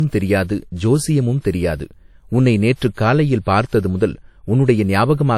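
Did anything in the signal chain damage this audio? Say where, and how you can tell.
Yes, at the codec stage: throughout, a spectrogram shows nothing above 19.5 kHz. This is likely low-bitrate audio saved at a high bitrate, with earlier losses preserved in a larger file.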